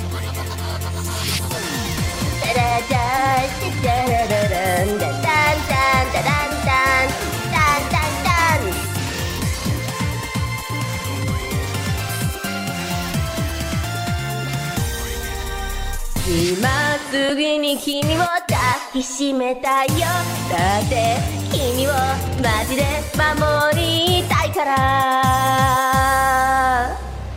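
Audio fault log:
17.29 s, lost LE Audio frames: the Bluetooth LE Audio link dropped about 10 ms of audio, which points to a single lost LC3 frame. To fill the gap, the decoder reused the previous frame's spectrum with its signs randomised, so the original sound there is replaced by a brief noisy smear with no clear pitch or detail. Because the loss was this short, the concealment did not reach the point where it fades toward silence.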